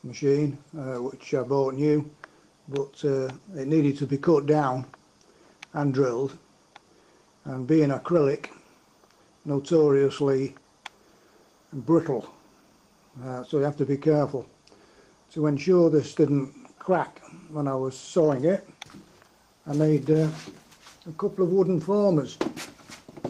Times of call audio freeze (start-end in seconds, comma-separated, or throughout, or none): none